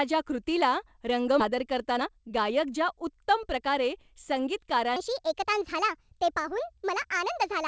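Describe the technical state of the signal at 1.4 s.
At 1.40 to 1.42 s there is a skip ahead: roughly 0.7 s of audio was discarded with nothing filled in, so the speech jumps forward abruptly. Right after, from 1.49 to 3.71 s, a jitter buffer speed-up trims short pitch-period pieces, so the speech runs about 12% faster at unchanged pitch.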